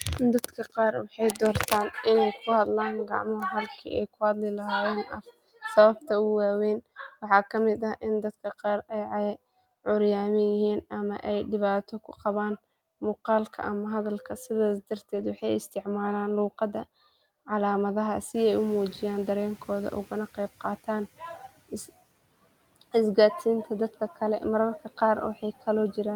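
A speech recording where the noise suppressor cuts into the speech four times, at 0.44–1.71 s, 2.34–2.48 s, 3.05–3.93 s and 5.03–5.31 s. It mistakes quiet parts for noise and pulls them down by up to about 18 dB, so they sound swallowed. On a spectrogram, consonant and word-ending energy fades into the dark floor. Between 15.15 and 15.29 s, a lost packet rebuilt from error correction gives about 80 ms of rougher, noisier sound with no gap, which fits roughly four lost packets. The spectrogram shows smeared, grainier harmonics there, with no silent break in the waveform. Room noise rises by about 24 dB near 18.5 s, and the noise suppressor catches up over 18.34–21.09 s. The noise passes at first, then sinks by about 11 dB across 2.75 s, a tapering band of broadband haze on the spectrogram.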